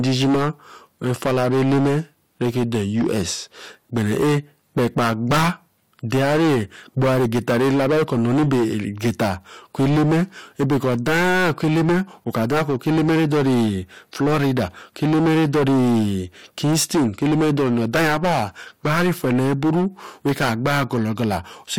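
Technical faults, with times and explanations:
Throughout, hard clipping: every loud stretch of the speech carries a harsh, buzzing fuzz. The signal is driven about 24 dB beyond what the stage can pass, so around a fifth of the waveform is sliced flat, and those flat tops spray harmonics high up the spectrum.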